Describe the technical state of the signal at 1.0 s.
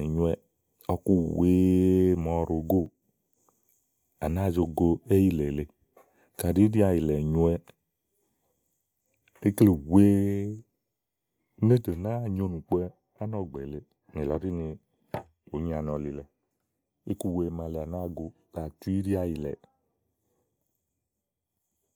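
At 1.0 s the speech signal is intact, with no audible fault at that moment.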